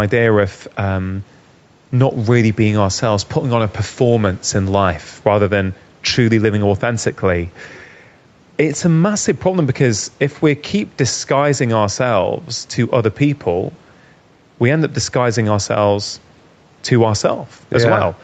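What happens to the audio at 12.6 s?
Gain pumping is present at 12.6 s, as it is throughout the speech. The microphone gain is likely set too high, so a fast limiter pulls the level down by around 5 dB on each loud syllable, bringing loud and soft parts closer in level and squashing the sound.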